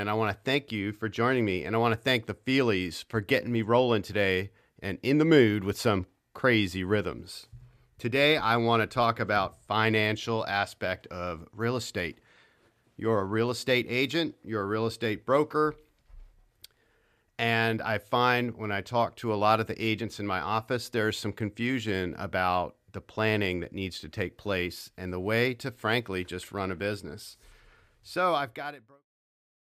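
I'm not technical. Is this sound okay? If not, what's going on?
Yes, nothing is wrong with this speech; the sound just fades out smoothly from around 27.5 s to 29.07 s, as an editor would end a clip.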